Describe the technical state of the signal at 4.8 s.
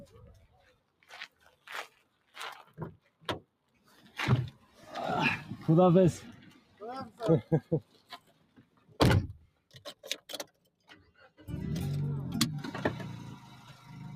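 Sound cut by the noise suppressor, 4.53 to 4.85 s: a speech-tuned suppressor mistakes this passage for noise and pulls it down by up to about 10 dB, so it sinks. Underlying this, a noise suppressor is applied to music or sounds throughout, swinging gain by roughly 20 dB and leaving held notes and tails sinking while attacks mostly get through.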